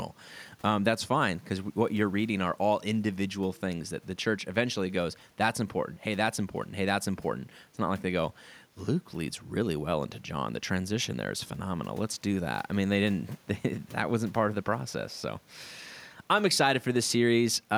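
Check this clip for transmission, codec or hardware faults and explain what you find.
Nothing in the speech signal points to a problem in transmission, coding or hardware, so there is nothing to report.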